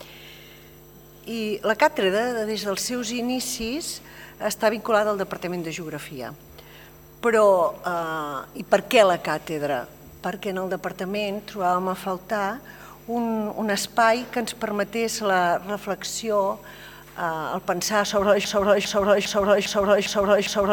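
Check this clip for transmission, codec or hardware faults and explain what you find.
One fault is present. From 18.44 s to the end, a broken-record loop repeats a 0.40 s fragment six times, most likely a stalled player or stream resending its last buffer. The waveform shows identical blocks tiling back to back.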